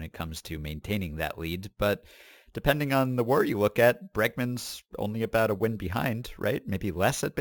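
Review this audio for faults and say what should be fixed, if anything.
The speech was upsampled by sample-and-hold, repeating each sample with no interpolation or smoothing filter. This causes imaging from sample-and-hold upsampling throughout the clip. Mirrored copies of the spectrum fill the band from 8 kHz to 16 kHz at about 20 dB below the speech, which points to an original rate of 16 kHz. The result is a bright, metallic fizz that swells and fades with the speech, its lowest copy moving opposite to the pitch. Prevent this by upsampling through a proper anti-imaging low-pass filter that removes everything above 8 kHz.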